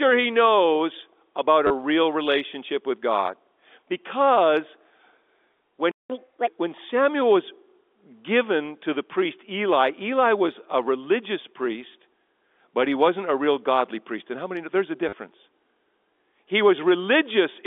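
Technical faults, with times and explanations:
1.67–1.70 s, 11.93 s and 15.09–15.13 s: packet loss with last packet repeated. After "he knows about", "was a religious" and "many know there's a", 30 ms, 10 ms and 40 ms of audio are lost and filled by replaying the previous packet. The lengths fit 10 ms packets. The repeats seldom line up with the pitch, so the longer runs stutter with a 100 Hz robotic buzz, and the single repeat is a small blip.
5.91–6.10 s: playback stall. The sound cuts out in mid-flow for about 185 ms, then resumes. The likely cause is the player running dry of buffered data or its output thread being blocked, leaving nothing to send to the output until it recovered.
6.10–6.47 s: catch-up at higher speed. Right after the stall, the backlog is played at 1.5 times normal speed by resampling. Pitch rises with it, by roughly seven semitones, giving a brief chipmunk-like lift before speed and pitch settle back to normal.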